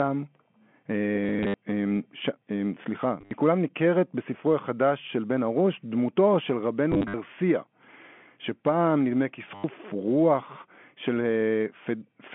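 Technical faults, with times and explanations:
1.24 to 9.64 s, packet loss with last packet repeated: four bursts, at 1.24 to 1.54, 3.21 to 3.31, 6.92 to 7.14 and 9.55 to 9.64 s. The receiver replayed the last packet until new ones arrived. Runs of up to 90 ms give a robotic stutter buzzing near 100 Hz, which fits 10 ms packets.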